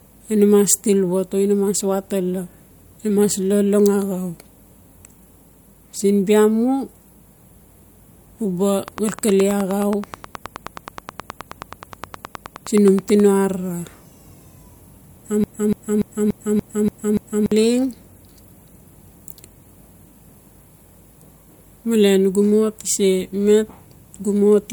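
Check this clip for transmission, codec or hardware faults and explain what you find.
Two faults are audible in this speech recording.

From 8.88 to 13.21 s there is a train of clicks. Sharp, similar pulses arrive about 9.5 times per second at a regular pace, roughly forty in all. They stand out well above the speech, peaking around 10 dB louder. They tick through pauses as well as words. The likely cause is interference from nearby equipment or a faulty connection or power supply injecting the same pulse over and over.

From 15.44 to 17.52 s there is a broken-record loop. A fragment of about 289 ms repeats exactly, back to back, seven times. The effect is a stuttering, mechanical replay that goes nowhere. The likely cause is a stalled player, encoder or stream that kept resending the last fragment it held. Whatever should have played during those two seconds is lost.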